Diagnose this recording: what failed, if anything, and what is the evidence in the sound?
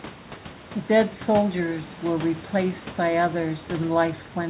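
Nothing stood out on listening: the room noise sits about 19 dB below the speech and the band stops at 4 kHz, as expected from a G.711 mu-law call path at 64 kbps.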